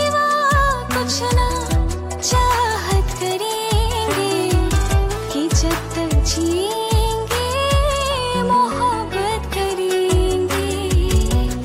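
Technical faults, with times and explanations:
No technical faults detected anywhere in the clip.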